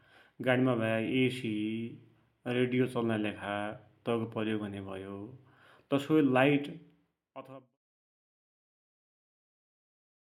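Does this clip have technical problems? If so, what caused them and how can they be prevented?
No, this clip has no technical problems; the level fades out smoothly from about 6.5 s to 7.78 s, as an editor would finish a clip, so there is nothing to prevent.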